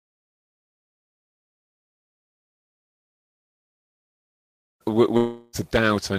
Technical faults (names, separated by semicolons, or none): long network dropout